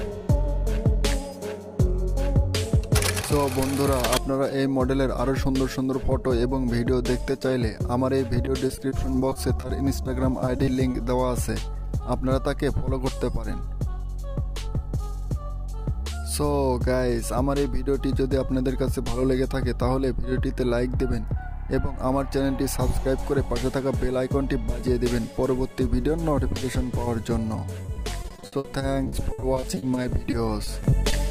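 From 8.45 to 10.07 s, and again from 10.45 to 10.96 s, you get repeated packet loss (robotic sound). Bits of the stream keep arriving late or not at all, and each hole is papered over by stretching the last bit of sound. The gaps are short, 20 to 30 ms, but they come back to back, so it turns choppy. The longest stretch is 27.82 to 31.14 s, with holes up to 60 ms and roughly a fifth of that span patched.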